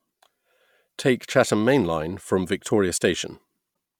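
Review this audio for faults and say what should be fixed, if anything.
Damaged data in a compressed stream near the end, from 3.71 to 3.73 s: corrupted bytes made the decoder misread the frames there and lose sync until it found the next frame header. The speech is briefly disrupted there. Prevent it by checksumming the stream and retransmitting or concealing bad frames instead of decoding them.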